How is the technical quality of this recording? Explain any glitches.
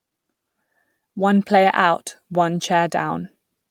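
No technical faults can be heard anywhere in the recording, and the signal stays intact throughout.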